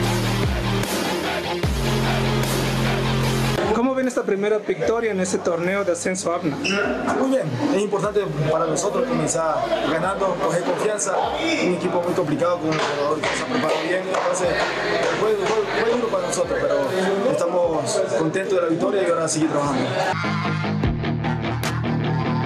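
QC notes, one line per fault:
throughout: gain pumping. Gain swings about 10 dB, pulling loud and soft parts closer in level and squashing the sound. Likely a fast limiter fighting excessive input gain.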